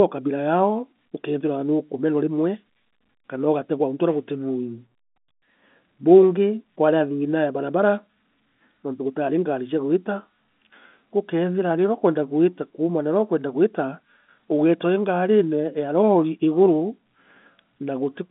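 No technical faults can be heard anywhere in this speech. The sound comes through G.711 telephone coding working as intended, with the usual telephone band running from about 150 Hz to 3.5 kHz and nothing present above 3.8 kHz.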